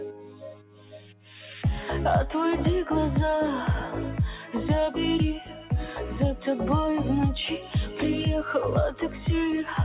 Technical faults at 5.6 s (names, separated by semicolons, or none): noise suppressor applied to music or sounds; sound cut by the noise suppressor